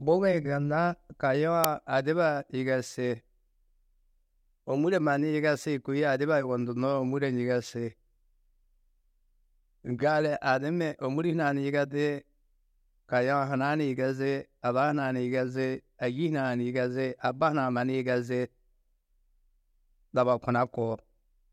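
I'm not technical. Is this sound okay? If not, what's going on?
No. At 1.64 s there is a tiny but loud crack, caused by an uninitialised buffer. The playback system grabbed a small chunk of memory and played it before any real audio had been written into it, so whatever leftover data was there came out as noise. It lasts under three milliseconds, which fits a 128-sample buffer. Unlike a brief silent dropout, this is a loud crack that has nothing to do with the surrounding speech.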